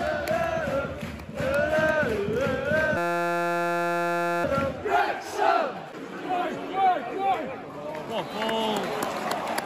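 A system hang loop runs from 2.97 to 4.44 s. The host or driver stalled while the audio hardware kept replaying the same small stretch of its ring buffer, so a 5.8 ms fragment repeats exactly, some 250 times over. That loop length fits a 256-sample buffer. Because the piece is so short, the repetition fuses into a steady buzz at about 172 Hz, then normal sound resumes with little or nothing apparently skipped.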